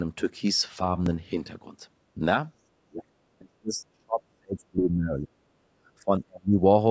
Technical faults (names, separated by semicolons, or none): repeated buffer; speech suppressed in double talk